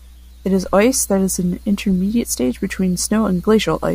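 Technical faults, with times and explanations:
No technical faults can be heard anywhere in it.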